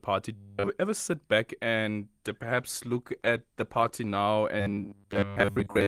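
From 0.36 to 0.70 s the speech becomes a rigid metallic buzz at a steady 100 Hz, robotic sound from repeated short buffers, likely caused by the same 10 ms of audio being looped while the real audio is skipped. The fixed pitch, unrelated to the speaker's own, separates it from codec roughness. Between 2.27 and 4.21 s a call bitrate drop from 32 to 16 kbps, held at its lowest for about 1.9 s, leaves the speech coarser and duller, with no imposed buzz. From 4.60 s to the end, the 100 Hz buzz returns, covering most of that stretch.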